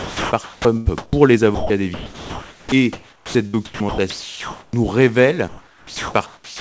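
Speech carried over a call link, with nothing above 8 kHz, which fits a G.722 wideband path at 64 kbps. From 0.0 to 1.13 s and again from 1.55 to 4.73 s the speech is chopped by the voice detector. Within the first stretch about 0.77 s of audio is replaced, and within the second about 2.28 s. The holes come wherever the sender's detector stopped sending and then resumed, leaving smooth synthetic fill in place of parts of the speech. This is likely discontinuous transmission filling gaps with RFC 3389 comfort noise. From 5.48 s to the end at 6.61 s, about 1.01 s of the real background is replaced by comfort noise, which is a smoother, synthetic hiss of different character from the real background it stands in for. This is likely the receiver generating noise from the sender's occasional background updates while no audio frames arrive. The same fill persists because transmission has paused rather than because the line has gone dead. 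The last part, from 6.26 to 6.61 s, is sound dropped by the voice detector. About 0.35 s is filled with steady noise, and about 0.24 s of actual sound is lost. The detector likely judged the trailing speech to be background and stopped sending, so the ending gives way to comfort noise before the clip closes.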